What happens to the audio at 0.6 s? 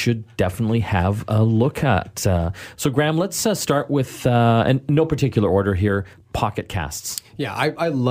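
Nothing goes wrong at 0.6 s; the speech runs on without any audible fault at that point.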